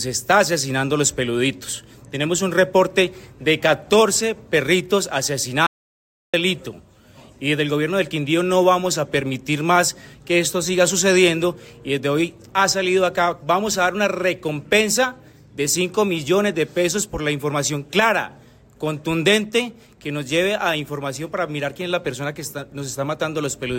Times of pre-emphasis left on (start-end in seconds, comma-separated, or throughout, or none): none